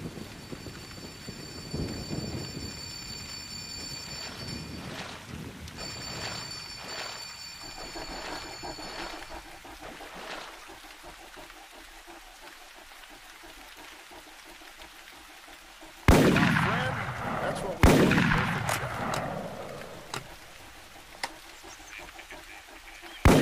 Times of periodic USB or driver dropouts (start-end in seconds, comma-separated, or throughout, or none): 17.38-21.08